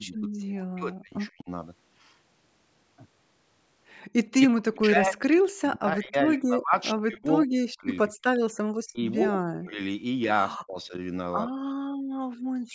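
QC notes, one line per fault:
0.0–1.49 s, 4.49–8.12 s, 8.84–9.8 s, 10.53–10.77 s and 12.66 s to the end: speech suppressed in double talk. The speech sinks by roughly 40 dB (around 30 dB at 10.53 s), worst across 4.49–8.12 s with about three seconds affected. The likely cause is that the echo canceller could not separate the near talker from loudspeaker echo and turned both down.
11.54–12.38 s: background gated by the echo canceller. The room sound drops by about 32 dB for roughly 0.7 s, then comes back. The canceller clamps the microphone hard while the loudspeaker is playing and releases it when it lets go.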